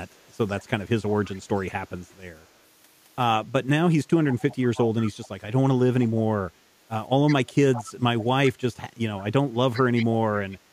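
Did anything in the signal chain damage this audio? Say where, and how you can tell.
Yes, an echo leak at the call-processing stage: a delayed copy of the speech, 162 ms behind, surfaces at 0.60–0.64, 1.10–1.41, 2.11–2.44, 4.30–5.28, 7.27–7.35, 7.73–8.50, 9.73–10.06 and 10.51–10.57 s. It is loudest from 4.3 to 10.06 s, and very faint near 2.1 s. The likely cause is a far-end echo canceller letting loudspeaker pickup through. Unlike room reverberation, it is a discrete copy at a fixed lag rather than a smooth decaying tail.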